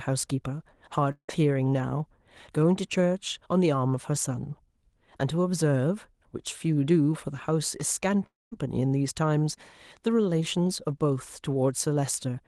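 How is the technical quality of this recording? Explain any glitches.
The recording has two audible breaks where a piece of the speech is lost. Both are long network dropouts.

Long network dropout, 1.11 to 1.30 s and 8.26 to 8.65 s: the likely cause is a run of packets that never arrived, about 0.18 s in the first gap and 0.26 s in the second. The receiver extends the last sound as a fading buzz, then goes quiet or near-quiet before speech resumes without the lost part. On a spectrogram, each gap shows smeared, blurred harmonics fading into a dark band. On a waveform, the amplitude tapers toward flat. The top of the spectrum sits near 12 kHz throughout, consistent with the call codec path.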